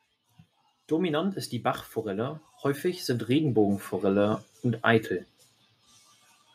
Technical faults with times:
2.03-5.16 automatic gain rising

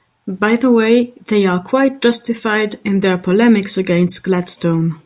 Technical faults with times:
none

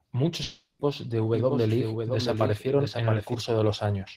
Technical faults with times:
0.43-0.82 long network dropout
1.34-3.34 doubled audio track

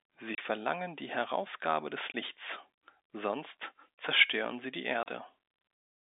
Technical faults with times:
0.35-0.38 packet loss filled with silence
2.12-2.14 packet loss filled with silence
5.03-5.06 packet loss filled with silence

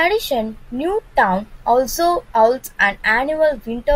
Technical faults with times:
none

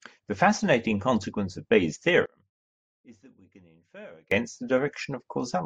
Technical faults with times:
2.26-4.31 one channel inverted

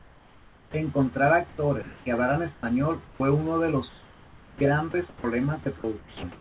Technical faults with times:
0.00-0.74 comfort noise in place of the background
1.49-2.06 comfort noise in place of the background
2.54-2.63 comfort noise in place of the background
3.05-3.20 comfort noise in place of the background
3.89-4.61 comfort noise in place of the background
4.59-4.61 onset clipped by the voice detector
4.91-5.24 sound chopped by the voice detector
5.63-6.40 sound chopped by the voice detector

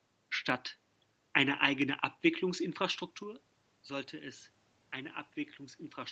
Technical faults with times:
0.50 dropped samples
1.82 dropped samples
3.23 dropped samples

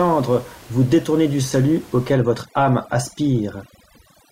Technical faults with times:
2.13-4.32 overdone noise removal

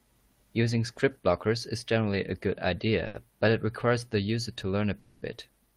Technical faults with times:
3.07-3.26 short stall from a late packet
4.99-5.35 call audio freeze

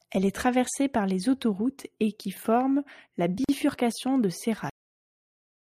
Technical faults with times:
3.44-3.49 gap at a join of encoded pieces
4.70-5.69 cut-off end

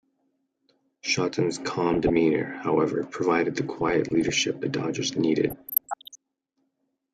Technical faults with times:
1.94-2.16 DAB burbling
3.78-4.34 DAB burbling
5.48-6.15 DAB burbling

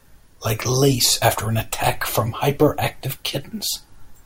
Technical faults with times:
none

